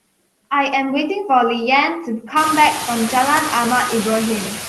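Noise suppressor artifacts run through the whole speech clip. The suppressor estimates which frequency bands hold steady noise and pulls them down frame by frame, cutting the noise by about 20 dB in the gaps between words. When speech returns, those bands open again, so the noise dips in pauses and comes back up under each phrase. The room noise rises by about 19 dB at around 2.5 s, ending about 9 dB below the speech.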